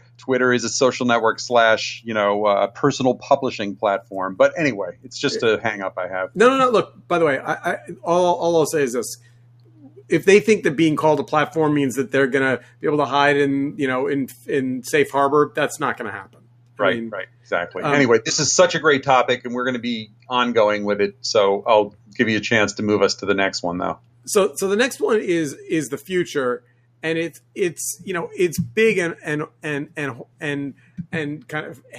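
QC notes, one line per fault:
Throughout: noise suppressor applied to music or sounds. A speech-tuned suppressor treats sustained content as noise, so level swings about 10 dB and tails shrink. Waveform envelope pumps, and the spectrogram shows fading sustains.
0.00–0.28, 4.02–5.10, 6.88–10.11, 12.60–17.51, 20.07–22.18, 23.97–24.27, 26.60–27.56, 29.48–31.93 s: sound cut by the noise suppressor. Steady or decaying sound is pulled down by up to about 12 dB while sudden onsets survive. The longest affected stretches fall between 6.88 and 17.51 s. On the waveform these appear as dips in the envelope, and the spectrogram shows sustains and decays that thin out early.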